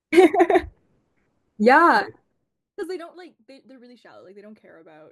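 From 2.2 to 3.2 s there's zipper noise: the level drops by roughly 25 dB in 1 dB jumps, about thirty a second, with no smoothing between them. Each jump clicks, so you hear a fast ticking over the speech.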